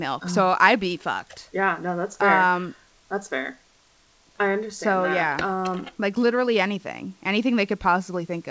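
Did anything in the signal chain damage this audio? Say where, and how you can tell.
No, nothing in the signal chain stood out as damaging this speech on listening; the top end stops around 8 kHz, as expected from a wideband call codec like G.722, and the room noise sits about 42 dB below the speech.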